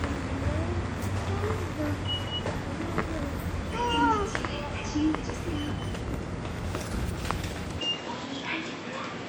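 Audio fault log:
7.79 to 9.28 s, input switched to a poorer device: The sound turns duller from 7.79 s to the end. Nothing is heard above 7.8 kHz, so the top sparkle is gone. There is no gap at the change, and the level stays much the same. A new, different background hiss appears, well below the sound. The likely cause is a switch to a narrower-band input, which brings its own tone and noise floor.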